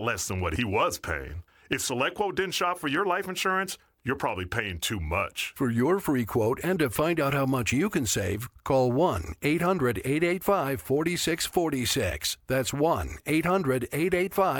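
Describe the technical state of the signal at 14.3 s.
At 14.3 s the signal is intact, with no audible fault at that moment.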